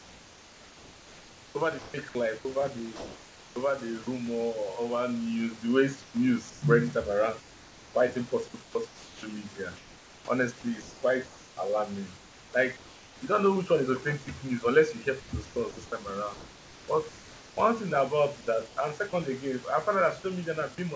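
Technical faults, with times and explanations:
0.00–3.56 s, 6.02–13.22 s, 15.20–17.57 s and 18.68–18.77 s, comfort noise in place of the background: In the pauses, the room's natural background gives way to a smooth, even hiss with no detail. About 2.4 s is replaced in the first span, 3.1 s in the span after "over news the way" and before "you don't know which", and 1.2 s in the span after "news unless you hear" and before "thing about". In the last span, 90 ms is replaced. There the background sits about 24 dB below the loud passages and dips by about 2 dB. The likely cause is discontinuous transmission. The sender stopped sending when it detected no speech, and the receiver filled the gaps with synthetic noise that only roughly matches the real background.
2.39–2.45 s and 15.20–15.32 s, sound dropped by the voice detector: Brief pieces of speech are swallowed and replaced by steady noise. 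Just after "news unless you hear", 120 ms is replaced and about 60 ms of speech is lost. At 2.39 s, 60 ms is replaced and about 30 ms is lost. The likely cause is that the sender's voice detector mistook quiet speech for background and paused transmission. The receiver played comfort noise until the detector triggered again.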